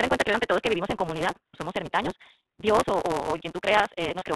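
Speech runs through the iLBC codec all the way, with plainly audible damage: nothing above 4 kHz, and a rough, slightly synthetic edge that fits its 20 ms frame mode, unlike the smeared, watery sound of transform codecs at low rates. A block size mismatch (truncated) adds a steady 172 Hz buzz and makes everything play about 1.88 times too fast at roughly normal pitch. That fits a reader taking 256-sample blocks while the tail of each longer block is discarded, which a plain speed-up would not do, because that would raise the pitch. Lost iLBC frames cause brief held, buzzy vowel-like stretches at 0.31–0.35 s, 1.47–1.55 s, 2.37 s, 3.37–3.40 s and 4.18–4.23 s. The one at 2.37 s is 200 ms of losses scattered over 320 ms, with the longest run near a tenth of a second. Unlike dropouts into silence, each gap is filled and the voice is right again almost at once afterwards.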